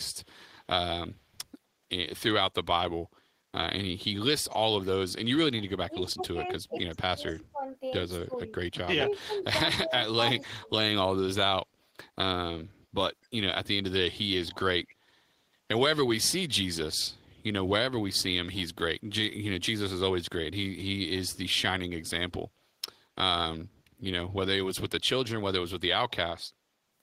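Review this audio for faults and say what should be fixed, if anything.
Speech suppressed in double talk: the speech dips by about 15 dB between 5.86 and 7.63 s, and by up to about 30 dB between 8.25 and 10.7 s. The likely cause is the echo canceller turning down both sides while it was unsure whether it was hearing its own talker or loudspeaker echo. Better double-talk detection in the canceller would prevent this.

Echo leak: a faint copy of the speech, 243 ms late and about 30 to 40 dB below it, is heard at 9.16–9.44 s, 13.23–13.28 s, 14.5–14.95 s and 26.1–26.15 s. It likely comes from a speakerphone's residual echo getting past the far end's canceller. Unlike room reverberation, it is a distinct repeat at a fixed delay. Retuning the far end's canceller, or having that side use a headset, would stop it.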